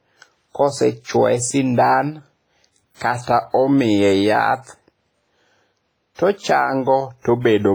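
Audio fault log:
throughout: low-bitrate audio saved at a high bitrate. The speech keeps the artefacts of a heavily compressed encoding, even though content reaches 20.1 kHz. This likely comes from a low-bitrate source, pointing to WMA near 24 kbit/s, re-saved as high-bitrate MP3, which cannot restore what was lost.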